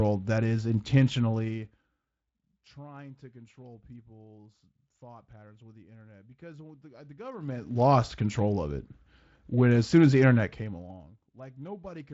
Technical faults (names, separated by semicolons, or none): zipper noise